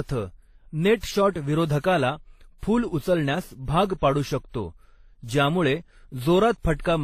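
A speech clip with transcoding between lossy codecs throughout. Nothing remains above 14.9 kHz. Several kinds of codec artefact are heard at once. The sound likely passed through MP3, then HE-AAC, then WMA, each re-encoding the earlier damage and adding its own.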